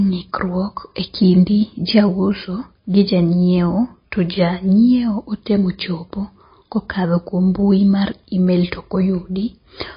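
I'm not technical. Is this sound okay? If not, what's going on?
No. The whole clip has a dull, muffled quality, as if the treble were switched off. Nothing reaches above 5 kHz, so the crisp edges of s and t sounds are gone. The speech also has a watery, swirling texture. This is plainly audible from start to finish. The likely cause is heavy MP3 compression. When the file is squeezed too hard, the encoder throws away the high end and thins out quiet detail.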